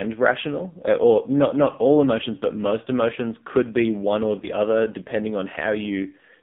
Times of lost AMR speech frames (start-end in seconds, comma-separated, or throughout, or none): 4.40-4.48